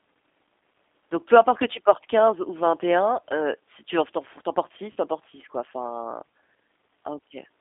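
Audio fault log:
Throughout: G.729 codec. The speech has that rough, slightly synthetic edge of a low-rate VoIP codec running at 8 kbit/s, rebuilt from a vocal tract model and a handful of pulses per frame. The line band sits around 250 Hz to 3.6 kHz, so it's thin and boxy with nothing up top.
4.92 to 4.96 s: VoIP packet loss concealed by the speech codec. Right after "four tu en portes" about 40 ms drops out, which sounds like two packets, and the decoder stretches its last pitch and filter into a short buzzy tone or coloured noise that fades. It's still weak or distorted going into "tu en portes", since each frame leans on the previous one.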